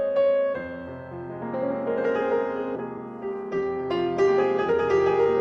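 Right around 2.75 s there's a skip ahead. Roughly a second of audio just never plays: it got thrown out, probably in transit or when the jitter buffer overflowed, while newer audio was already queued behind it. Nothing fills the hole, so the sound on either side gets stitched together almost directly. You hear an abrupt jump forward rather than a dropout or silence, as if someone nudged the playhead.

Then from about 2.97 s to 5.35 s a jitter buffer speed-up kicks in. The buffer is holding more than it wants to, so the receiver trims away tiny pitch-period-sized slices over and over to catch up. It ends up shaving off about 0.15 s in total, running about 7% fast. Pitch stays put, but the audio feels rushed through that stretch. All of it sits on a call-codec path whose top end stops near 12 kHz, which fits Opus at a moderate bitrate.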